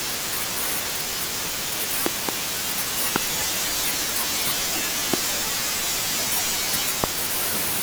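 Loud pops hit the speech at 2.06 to 2.31 s as a double, then singly at 3.16, 5.14 and 7.04 s. Each jumps roughly 20 to 25 dB above the signal. A likely electrical spike from a plug, switch or static causes them.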